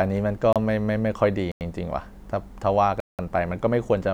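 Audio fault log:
0.53–0.56 s, 1.52–1.61 s, 3.00–3.19 s: block of digital silence. Output buffers went unfilled (the 93 and 186 ms gaps fit 4096- and 8192-sample buffers), so the sound drops abruptly to silence and back with no fade, and the holes grow from 30 ms to 186 ms.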